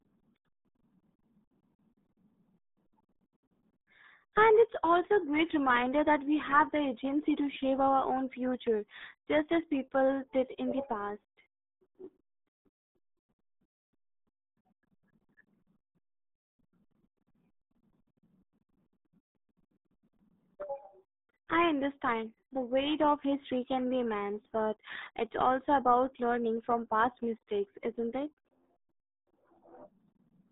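From start to finish the speech carries the RealAudio 14.4 codec's signature: everything lives between about 200 Hz and 3.7 kHz, nothing above 3.8 kHz, and heavy coding damage leaves the speech muffled and gargly. That crude, starved sound fits an 8 kbit/s dial-up-era speech coder.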